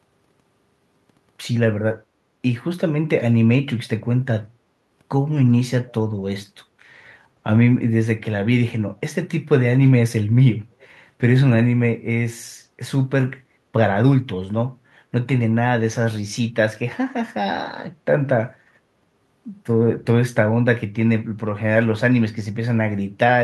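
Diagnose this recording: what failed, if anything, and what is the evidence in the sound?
At 5.88–5.93 s and 10.8–10.88 s, a faint scrap of the speech returns 364 ms late, roughly 30 to 35 dB down. This is an echo leak in call processing, likely residue a loudspeaker-side echo canceller missed. A spectrogram shows a dim harmonic repeat offset by 0.36 s.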